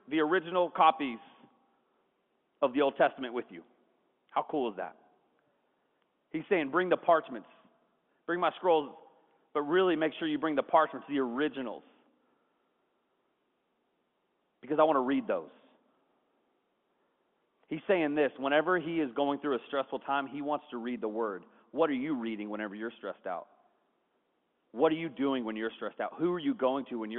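There are no technical faults to describe in time order in this speech, which comes over G.711 telephone coding with its line band of 200 Hz to 3.4 kHz.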